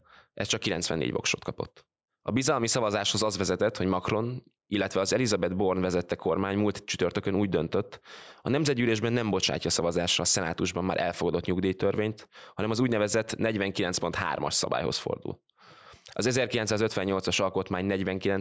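Gain pumping runs through the whole speech clip. The gain swings by around 5 dB, pulled down under every loud syllable. Loud and soft passages sit close in level. The likely cause is excessive input gain driving a fast limiter. The call microphone processing leaves nothing above 8 kHz.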